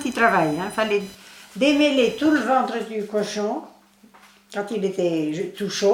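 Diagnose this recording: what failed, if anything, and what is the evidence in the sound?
Computer activity noise sits in the analogue wiring stage. From 0.0 to 2.43 s, a buzzing chirp pulsing near 1 kHz rides under the sound, roughly 25 dB below it. Shifting processor or graphics load disturbs the shared ground, injecting that interference.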